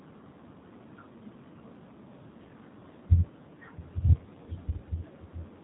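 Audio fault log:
Throughout: G.729 codec. The speech is rebuilt from a vocal tract filter, a pitch predictor and a few pulses per frame, so it sounds rough and slightly synthetic, which fits an 8 kbit/s budget. A spectrogram shows nothing above 4 kHz and smeared, blocky harmonics.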